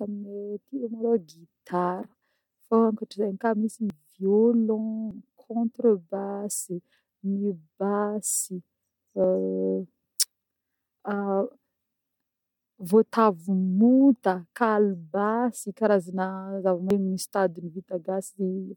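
Dropped buffers (overrun) at 3.90, 5.11, 6.55, 9.24 and 16.90 s: each jumps the speech forward, roughly 50 ms early on and 100 ms in the last two, likely from samples overwritten before being read.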